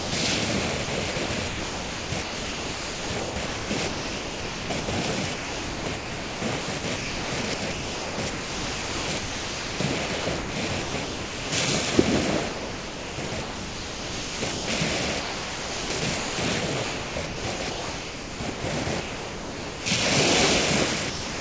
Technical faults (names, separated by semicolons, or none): sound dropped by the voice detector; sound chopped by the voice detector